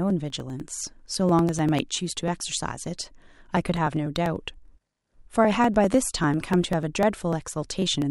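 From 0.10 s to 8.02 s, the speech carries periodic USB or driver dropouts. A background task stalls the audio path at a fixed interval. Each time, roughly a millisecond of audio is skipped outright, not replaced by silence. The stalls repeat every 0.099 s, about ten per second, giving dozens of losses across the span. Each splice jumps the waveform. That produces an evenly spaced tick, heard only while the voice is sounding.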